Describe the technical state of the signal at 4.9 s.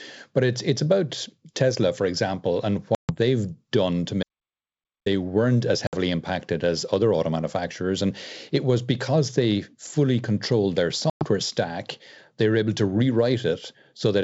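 At 4.9 s the signal is in an audio dropout to silence running from 4.23 to 5.06 s, about 0.83 s lost after "they've done to" and before "weren't as". The waveform flatlines to silence and the spectrogram shows a blank vertical band with no room tone, likely from the input being cut while recording continued.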